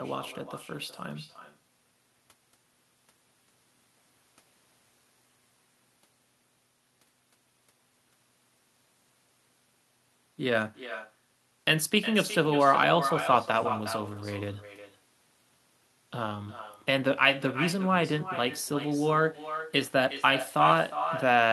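From start to finish, every phrase is trailed by a fainter, hollow copy of itself arriving roughly four tenths of a second later, sitting about 10 dB below the direct speech. This is echo with no canceller: the far end is playing the call through a loudspeaker, its microphone captures that playback, and nothing subtracts it before it travels back, so the talker's own speech returns after the network round trip.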